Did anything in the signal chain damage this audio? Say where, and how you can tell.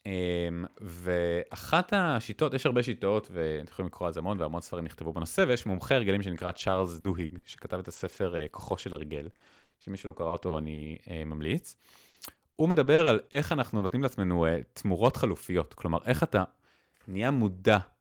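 Yes, the damage happens in the network stage. Repeated packet loss with robotic sound runs from 6.37 to 10.96 s and again from 12.08 to 13.92 s. The speech turns choppy and robotic there. Short holes come one after another, the longest about 60 ms. The receiver fills each hole by stretching the last good sound, so the same sound repeats where the real audio is missing. That patching covers about 11% of the first stretch and 17% of the second.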